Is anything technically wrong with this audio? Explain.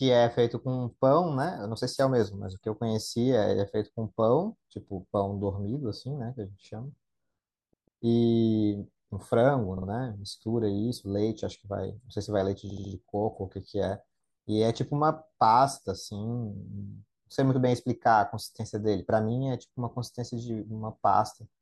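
Yes, the speech has repeated frames, where a 144 ms block replays twice at 7.73 to 8.02 s, a 48 ms block replays twice at 9.77 to 9.87 s, and a 72 ms block replays three times at 12.70 to 12.91 s. This is consistent with roughly 24 ms compressed frames being duplicated in the stream. Each repeat is heard as a stutter, and the clip gains about 0.6 s in total. A waveform or spectrogram shows identical stacked segments.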